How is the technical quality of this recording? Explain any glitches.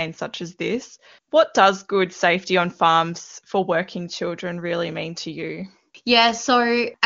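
No glitches are audible.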